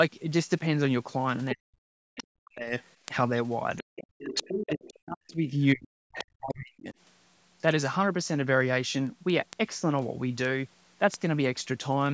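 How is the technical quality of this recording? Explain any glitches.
The recording has three recurring faults: a steady ticking that runs through almost the whole clip, and, in the first seven seconds, a pattern of the main talker being pushed down while a second voice leaks in. The speech itself carries nothing above 8 kHz, as expected from call microphone processing.

Word clock ticks run from 0.32 s to 12.06 s, roughly every 0.2 s, about fifty in all. They fit a digital link read by a receiver on its own clock, drifting by around a hundred parts per million from the sender. Each time the two clocks slip past each other, a single sample is dropped or repeated and the neighbouring samples are misread. Each slip is a short, sharp tick, with some ticks louder than others.

Speech suppressed in double talk shows up from 1.54 to 2.73 s, 3.80 to 4.22 s, 4.64 to 5.99 s and 6.41 to 6.95 s. In each span the talker's level sinks, at its deepest by around 40 dB, so the speech thins and drops out in pieces. 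The likely cause is an echo canceller faced with both parties talking at once. Unable to separate the near talker from loudspeaker echo, it turned everything down.

Other side's voice leaking through appears from 2.17 to 2.23 s, 3.77 to 4.94 s, 5.29 to 5.33 s and 6.12 to 6.26 s. The longest stretch, starting at 3.77 s, sits only about 5 dB below the main speech. The scrap at 6.12 s is about 10 dB down, the one at 2.17 s about 20 dB down, and the brief one at 5.29 s about 30 dB down. The likely cause is the far party's voice, played on a loudspeaker, not fully removed from the microphone signal.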